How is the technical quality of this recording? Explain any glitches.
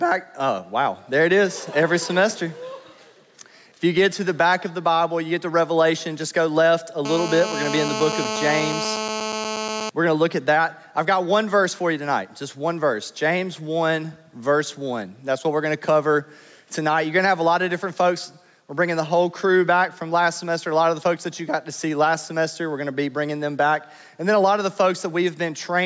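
The recording has two technical problems: level pumping that runs through the whole clip, and a burst of GSM phone buzz in the middle. The band stops at 8 kHz, as expected from call microphone processing.

Gain pumping runs from start to finish. The level dips by about 5 dB under each loud sound, squashing the dynamics. The likely cause is gain set too high, with a fast limiter clamping every peak. A noise gate would instead cut the gaps to silence.

GSM phone buzz sounds from 7.05 to 9.90 s. It is a hard, raspy buzz at about 217 Hz, only about 7 dB below the signal. It comes from a nearby 2G phone on a call, whose pulsed transmissions the audio circuitry rectifies. Mains hum would be a smoother 50 or 60 Hz tone, while this buzz is harsh and rich in harmonics.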